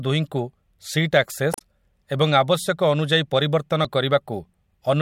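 At 1.50 s the speech breaks up until 1.62 s, and at 3.85 s a brief blip follows. Both come from damaged data in a compressed stream: corrupted bytes make the decoder misread frames and lose sync until it finds a valid header. On a spectrogram each shows as an abrupt break in the harmonic bands. In the waveform there is an abrupt discontinuity that breaks the speech envelope.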